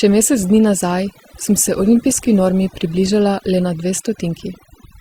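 Overdone noise removal runs the whole way through: the denoiser is set so hard it chokes bands near the noise floor, leaving near-silence with twinkly specks. Then from 1.08 to 3.08 s the adaptive stream drops to a lower bitrate, with codec artefacts rising, which sounds like a fall from about 64 to 16 kbit/s Opus, before snapping back without a gap.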